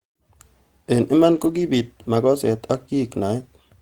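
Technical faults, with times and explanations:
1.31 to 1.61 s, lost packet rebuilt from error correction: just before "makoset ak" the speech turns rougher and noisier with no gap, because the decoder played low-bitrate copies carried in the following packets for about 160 ms of audio, unlike concealment's smeared repeats or dropouts.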